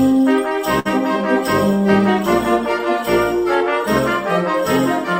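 A burst of packet loss at 0.79 to 0.88 s leaves a held, fading sound about 56 ms long, seen as smeared, decaying bands before the audio resumes further on.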